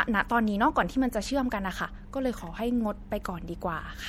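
From start to finish the speech carries plainly audible MP3 compression artefacts, likely from an encoder starved of bits, at a level that fits a low rate such as 64 kbps. Weak detail flickers in and out between frames, giving a watery, swirly texture with metallic chirps on sibilants and softened attacks. A spectrogram would show speckled, blinking patches of energy. The waveform itself would look largely ordinary.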